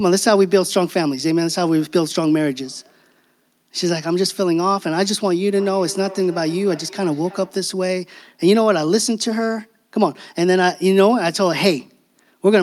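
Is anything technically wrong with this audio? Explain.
Yes. From 5.56 to 7.67 s there is feedback echo between two devices: another device replays this microphone's signal, which is picked up again outside any echo canceller's reach. Each sound returns about every 300 ms, peaking about 19 dB below the speech, thinner and more ringing. The waveform shows evenly spaced faint copies trailing each burst, and the spectrogram shows repeated, thinner smears.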